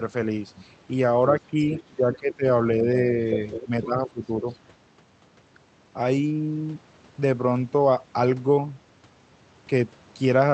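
From 1.47 to 2.45 s the speech is suppressed in double talk. It dips by about 10 dB in patches, likely because the echo canceller mistook overlapping talk for echo. Inside that span, from 2.13 to 2.34 s, the other side's voice leaks through faintly, about 20 dB below the speech, likely residual loudspeaker echo. Suppression returns from 2.78 to 3.05 s, shallower, about 5 dB. From 3.52 to 3.86 s the leak is louder, about 10 dB down. It overlaps a deeper suppression from 3.64 to 4.45 s. A last faint scrap of leakage sits at 4.54 to 4.59 s.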